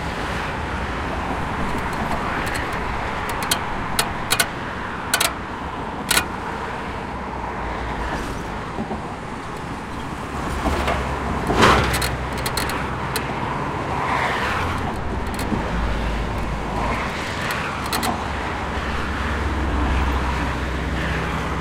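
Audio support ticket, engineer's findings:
No faults found in this recording of sounds. Nothing to escalate from this ticket.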